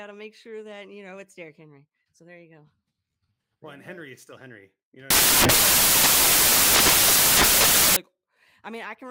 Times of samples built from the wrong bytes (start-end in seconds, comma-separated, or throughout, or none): 5.10-7.96